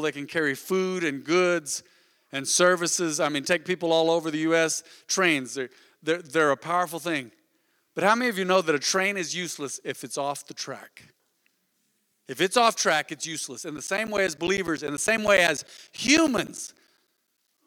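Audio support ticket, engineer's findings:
Periodic USB or driver dropouts, 13.77 to 17.58 s. Regular ticks every 0.1 s, audible only under speech. Each about 10 ms of signal replaced by silence, some forty gaps. Background task stalling USB bus or audio driver at fixed interval, starving the stream.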